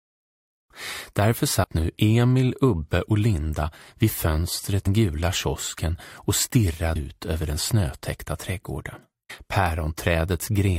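At about 1.63 s and again at 9.29 s there's a quick blip, each one over in under 20 ms. That's damaged data in a compressed stream: part of the file got mangled, so the decoder chokes on those frames, loses its place and has to hunt for the next valid frame header before it can carry on. What you hear is a brief chirp, squawk, click or short hole where the bad data hit.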